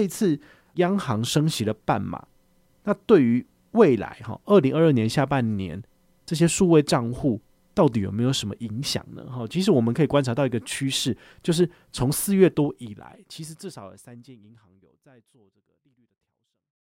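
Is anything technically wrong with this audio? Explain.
No, nothing is technically wrong with this speech audio.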